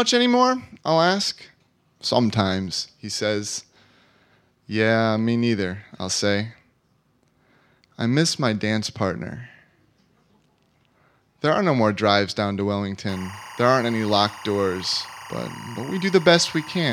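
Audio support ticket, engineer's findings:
Timecode bleed, 13.09 s to end, after "more drives down to": steady 1 and 2 kHz chirping warble, roughly 20 dB down. LTC leaking from adjacent track or cable.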